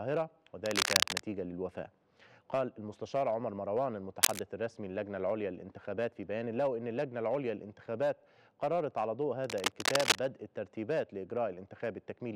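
Bursts of dense, uneven scratching and rustling cut across the audio from 0.66 to 1.22 s, 4.22 to 4.39 s and 9.44 to 10.19 s, at roughly 5 dB above the sound in the first two and about level with it in the last. This cable scratch noise is likely a worn connector or cable being moved, its contact resistance fluctuating rapidly.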